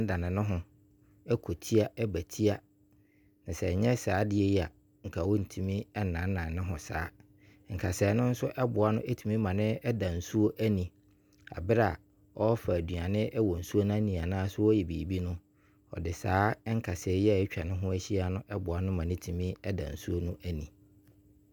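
Listening to this speech recording, nothing stood out as a technical problem at any point.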